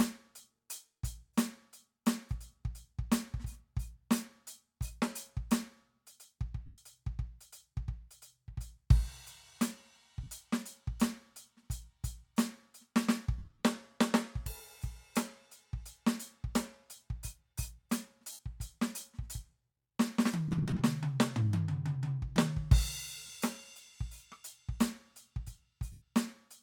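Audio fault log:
6.66–6.78, 10.24–10.28, 13.38–13.62, 18.32–18.39, 20.48–20.81, 23.26–23.30 and 25.92–26.02 s, lost LE Audio frames: the music briefly goes hazy and noisy instead of staying clear. The LC3 decoder fills each gap by replaying the last spectrum with scrambled phase, so held tones smear into hiss. Dropouts run from 30 to 172.5 ms, which fits 7.5 ms frames. The 13.38 and 20.48 s stretches are scattered losses with short runs, flickering rather than one smear.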